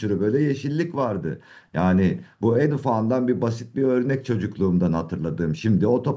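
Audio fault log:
2.17–2.22 s echo leak: a very faint scrap of speech returns 0.44 s late as a separate copy rather than a smooth reverb tail, likely loudspeaker pickup the echo canceller missed.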